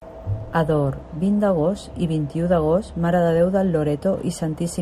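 No technical faults can be heard anywhere in this speech recording. Nothing in it stands out to a listener as having gone wrong at any point.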